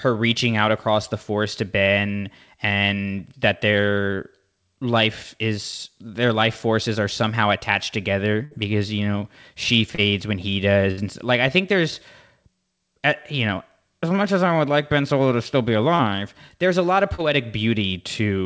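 At 8.45 to 8.54 s, after "forces are somehow attached", a burst of packet loss holds the last sound for about 60 ms and fades it, then jumps ahead past roughly 60 ms of missing audio. At 9.95 s, after "because you know she", a short concealed packet loss fills about 30 ms with a brief smear rather than an audible hold and skip. A second burst at 10.91 to 11.00 s repeats the held-then-skipped pattern. Further short concealed losses near 15.95 s and 17.15 s, the latter after "there's a lot of", give quick smears or wobbles, with no lasting gap.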